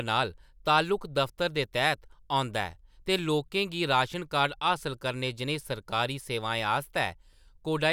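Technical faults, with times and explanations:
No technical faults detected anywhere in this speech recording.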